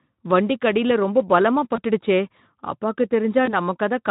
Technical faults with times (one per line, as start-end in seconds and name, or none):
1.75-1.79 VoIP packet loss concealed by the speech codec
3.45-3.55 VoIP packet loss concealed by the speech codec